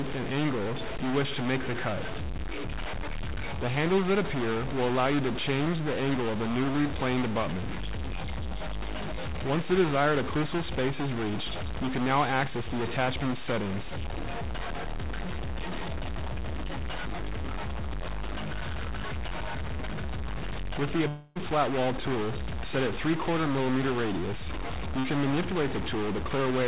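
Throughout, a distortion rides on the sound and the pauses fill with noise, likely from a stuck bit in the converter or data path forcing one bit to a fixed value. From 21.08 to 21.37 s a long network dropout occurs: about 0.28 s of audio is lost, likely never arriving, and the receiver fills it with a fading buzz or hiss before the sound resumes further on. From 24.99 to 25.06 s a short concealed packet loss of about 40 ms appears as a brief smear where the receiver continued the previous sound and blended back. Nothing is heard above 4 kHz, which fits the G.711 mu-law call path.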